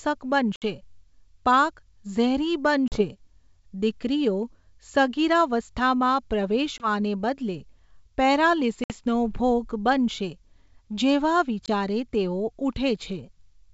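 Speech carried over a wideband G.722 link drops packets at 0.56, 2.88, 6.78, 8.84 and 11.66 s. This is packet loss on an ADPCM call: gaps of 20 to 60 ms (one to a few packets) are filled with silence, leaving hard-edged holes. The second of these holes follows "પાક ઝેરી", another follows "દીકરીઓ સગીરાવસ્થામાં", and another precedes "ભોગ બનશે". The decoder's predictor and step size then lose sync, so speech resumes with a brief level jump, click or distortion.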